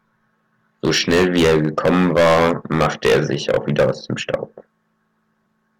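Speech, hard clipped throughout: driven about 16 dB past full scale, roughly one sample in fourteen is cut flat, giving harsh fuzz on every loud syllable.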